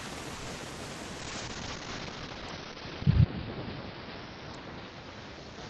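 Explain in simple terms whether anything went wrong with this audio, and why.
Repeated packet loss (robotic sound) from 0.35 to 0.64 s: four short gaps were patched by stretching the previous sound, making it choppy and robotic. Call bitrate drop from 1.2 s to the end: the connection forced coarser encoding, cutting sound above about 6 kHz, so it turns muffled and rough.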